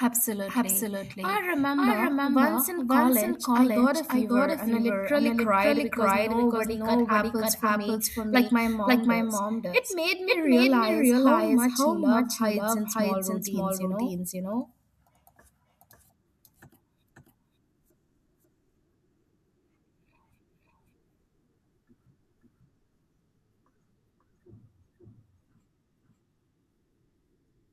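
A doubled audio track runs throughout this speech clip: an equally loud, dry copy trails about half a second behind, likely from a second, slower capture path.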